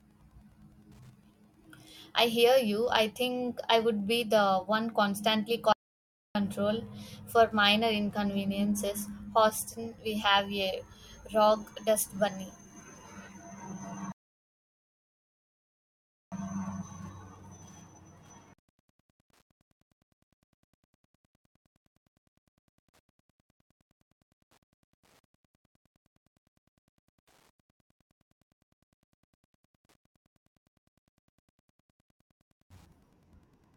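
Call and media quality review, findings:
Wi-Fi interference, whole clip. A nearby Wi-Fi radio is coupling into the audio circuitry, which rectifies its beacon transmissions, spaced 102.4 ms apart. The result is a steady faint tick running at close to ten per second beneath the speech, sitting far below it in level, with rougher rasps where data bursts fall between beacons. Component: analogue front end, mic preamp or cabling, near the radio.

Audio dropout to silence, 5.73 to 6.35 s. Input lost, likely a momentary disconnect or link failure upstream of the encoder, which kept writing silence. Speech cuts out mid-flow and returns abruptly. The gap is silent with no room tone. About 0.62 s of content is gone and not recoverable, so the timeline stays intact but material is missing.

Rebuffering stall, 14.12 to 16.32 s. Player buffer ran empty and playback halted until new data arrived. Component: delivery path or network throughput. 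Sound drops to silence for about 2.2 s, then resumes exactly where it stopped. No speech is lost. The pause is pure added time, stretching the timeline rather than removing anything.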